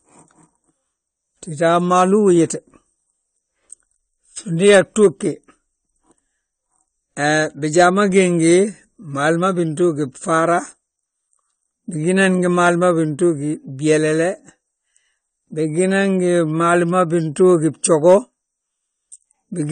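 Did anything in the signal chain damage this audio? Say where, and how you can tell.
Yes. The speech sounds dull and smeared throughout, with a fizzy, warbling edge on sibilants and nothing above about 9.1 kHz. That points to the codec stage, likely AAC compression at a low bitrate near 32 kbps, where coarse quantisation and a lowered cut-off discard high-frequency detail.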